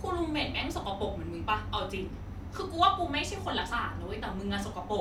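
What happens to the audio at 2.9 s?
Nothing goes wrong at 2.9 s; the speech carries on intact through that moment, with no dropout, click or distortion.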